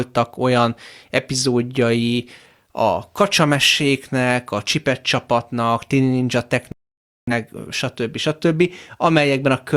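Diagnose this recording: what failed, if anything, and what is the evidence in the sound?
A digital broadcast dropout at the reception stage: the receiver stopped getting usable frames, either because the signal was lost or because frames failed their checksum, and it muted until valid frames arrived again. The speech drops to silence at 6.72 s and resumes at 7.32 s, a gap of about 0.55 s that fits roughly a dozen lost frames. Whatever was transmitted during that span is gone, so the speech picks up later rather than where it stopped.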